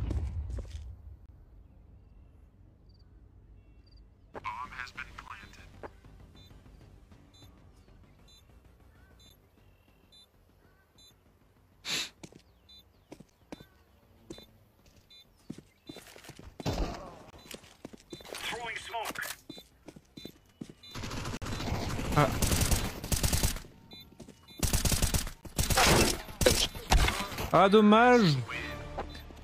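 Hard-edged silent holes from a gap between stream segments fall at 1.26–1.29, 5.28, 9.29, 13.30, 17.30–17.33, 21.37–21.42 and 25.41 s, roughly every 4 s at segment boundaries. Each lasts about 10 to 48 ms. Unlike a dropout, nothing is lost. The sound simply resumes slightly later.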